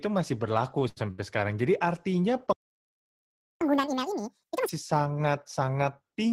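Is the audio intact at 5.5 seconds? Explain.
Yes, at 5.5 seconds the speech is intact, with no audible fault at that moment.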